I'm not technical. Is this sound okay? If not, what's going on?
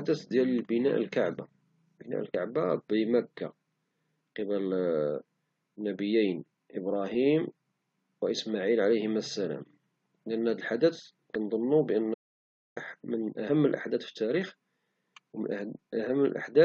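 No, it has a couple of problems. At 2.33 s, 11.34 s and 13.48 s you'll hear brief glitches where the speech jumps forward. That's compressed frames skipped: little chunks of the compressed file were missing or rejected, so about two or three frames (roughly 50 to 70 ms) just vanish. The last one lands right before "الأحداث في التاريخ".

From 12.14 s to 12.77 s the speech cuts out completely for about 0.62 s, dead silence with no background at all. That's an audio dropout to silence, likely from the input briefly disconnecting while recording carried on, so whatever was said there is lost.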